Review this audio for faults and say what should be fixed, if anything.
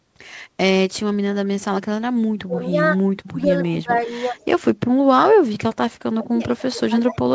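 The talker's speech sinks sharply in three stretches: from 2.21 to 4.35 s, dropping as far as about 30 dB for around a second in total; from 4.72 to 5.4 s, down about 35 dB for roughly half a second; and from 6.15 s to the end, down about 25 dB. This is likely speech suppressed in double talk. While the far side was talking, the echo canceller couldn't tell the local voice from loudspeaker echo and attenuated both. Better double-talk detection, or a headset in place of the loudspeaker, would prevent it.

A faint delayed copy of the voice trails about 152 ms behind in three short scraps: from 3.64 to 3.99 s at about 25 dB below the speech, from 4.34 to 4.45 s at about 35 dB below, and from 6.58 to 6.62 s at about 25 dB below. This is likely an echo leak. The far end's loudspeaker output reached its microphone, and that echo canceller let the residue through and sent it back. Improving that device's echo cancellation or acoustic isolation would stop it.

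The band ending at 8 kHz comes from the call's normal coding path.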